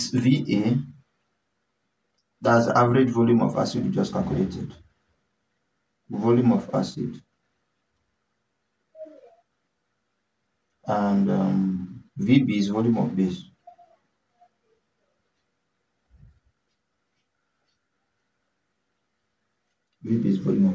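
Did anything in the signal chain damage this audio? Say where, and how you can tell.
No, nothing audible points to damage at any stage of the signal chain; the signal stays continuous and stable throughout.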